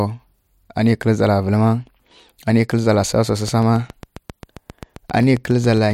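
A speech clip with a train of clicks from 3.48 to 5.92 s: about twenty regular pops at 7.4 per second, roughly 5 dB above the signal, likely from electrical interference. They show as evenly spaced vertical lines on a spectrogram and sharp spikes on the waveform.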